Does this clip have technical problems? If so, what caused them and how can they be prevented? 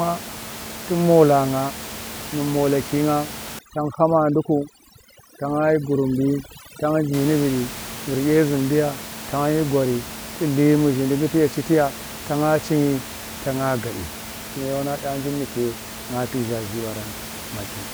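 Yes. Overdone noise removal runs from 3.59 to 7.14 s. Over that span a noise reduction stage set far too aggressively treats any frequency band close to its noise estimate as noise and pulls it down hard. The room noise, which sits about 13 dB under the speech elsewhere, drops and breaks up into twinkling specks, and the quieter parts of the speech are stripped away. Keeping the reduction amount modest, or capturing a cleaner recording to begin with, prevents this.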